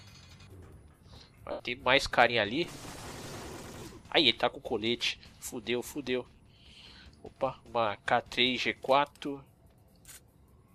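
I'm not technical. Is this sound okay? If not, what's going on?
No. There are three short gaps where lost LE Audio frames broke the sound, at 1.51 to 1.60 s, at 3.78 to 3.82 s, and a tiny one at 9.10 s. Some pieces of the wireless Bluetooth stream never arrived, so the decoder filled each hole by replaying the last bit of sound with scrambled detail. Unlike a plain dropout, the gap isn't silent. It becomes a brief hissy smear of what came just before, and the longest one starts to fade.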